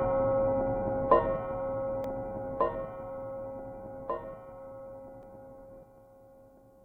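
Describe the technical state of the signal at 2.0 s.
A single sharp tick sounds at 2.04 s, where the audio drops out for about 0.73 ms. This is a block of digital silence: a brief run of samples, consistent with a 32-sample block, was zeroed, and the abrupt cut to silence and back creates the click.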